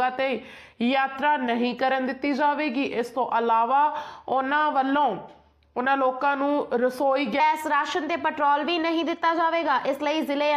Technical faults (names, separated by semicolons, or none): section at the wrong speed